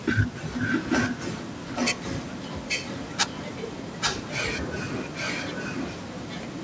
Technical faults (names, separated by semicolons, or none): echo leak